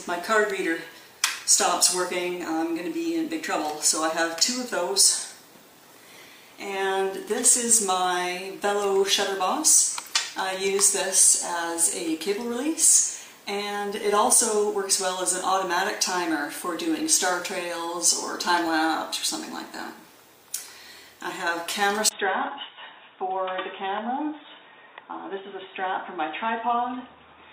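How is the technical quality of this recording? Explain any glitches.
The recording has one glitch, near the end. An input switched to a poorer device at 22.09 s and lasts to the end. After a 20 ms gap, the sound loses everything above 3.8 kHz, drops roughly 5 dB, and gains faint new background noise about 35 dB down. This likely comes from the system moving to a narrower-band microphone or headset, which leaves the final stretch dull.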